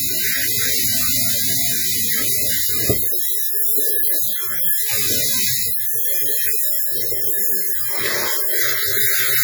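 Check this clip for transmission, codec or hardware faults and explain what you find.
One fault runs through the whole recording of everyday sounds: WMA compression. The sound rings and turns washy, with a hiss that swells and fades with the signal. This is likely heavy transform coding with long blocks smearing quantisation noise, consistent with roughly 32 kbps.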